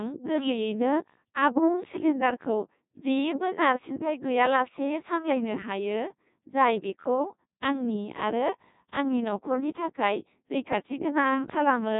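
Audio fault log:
throughout Codec 2 vocoder: the speech is rebuilt from sine waves carrying only pitch, voicing, energy and a spectral envelope, so it sounds robotic and buzzy, with nothing above 3.8 kHz. The heavy damage fits about 1.2 kbit/s. Unlike simple band-limiting, the waveform itself is lost.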